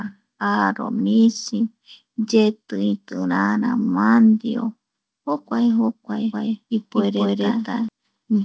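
From 6.33 s to 7.89 s the speech has a doubled audio track. A second full-band copy runs about a fifth of a second behind the first, at roughly the same loudness. It carries no decay or room colour, so it sounds like a clean, late repeat rather than an echo. It cuts in and out abruptly at those edges. The likely cause is a second capture through a slower path, or an edit holding two copies out of step. Both copies stop at 8 kHz, as the G.722 call codec allows.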